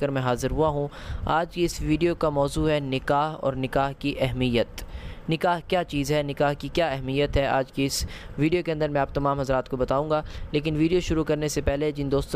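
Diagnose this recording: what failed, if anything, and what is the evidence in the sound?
Nothing failed; no faults found.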